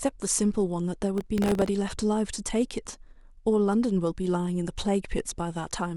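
From 1.18 to 1.69 s, processor overload crackle tears through the speech. The processor kept missing the deadlines for its tiny buffers, roughly 1.5 ms each. About twenty misses replayed stale audio with hard edges. It sounds like gritty, rapid crackling, then clears.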